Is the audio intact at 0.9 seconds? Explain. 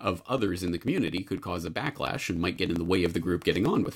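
No, 0.9 s falls inside a run of periodic USB or driver dropouts from 0.09 to 3.85 s, where roughly a millisecond is skipped every 0.099 s, giving steady ticks through the speech.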